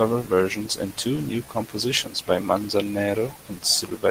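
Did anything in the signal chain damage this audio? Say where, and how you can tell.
Yes. The damage is at the receiver's network jitter buffer, caused by clock drift between sender and receiver. This speech clip's sender clock runs slow by roughly 4 percent, so packets arrive a little too slowly and the receive buffer keeps draining. The receiver has to fill the gap rather than play steadily. On a waveform this shows as small irregular seams in the signal instead of smooth, continuous syllable envelopes.

The fill-in shows up as repeated timing corrections from 0.35 to 4.00 s. Throughout that stretch the receiver keeps duplicating short pieces, all in the same lengthening direction but at uneven intervals. The result plays at 97 percent speed and gains around 150 ms overall. If heard at all, it comes across as faint hiccups or a slightly unsteady tempo. On a spectrogram, brief repeated slices appear as tiny stutters in formant tracks, and the spacing between them is irregular.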